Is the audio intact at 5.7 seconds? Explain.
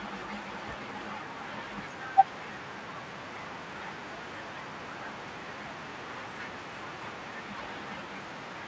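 Yes, the speech at 5.7 seconds is intact, with no dropout, glitch or other fault at that moment.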